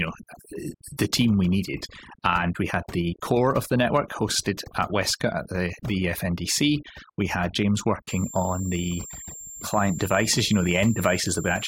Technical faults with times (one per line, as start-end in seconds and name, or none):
0.00-11.67 overdone noise removal
8.08-11.67 switching supply whistle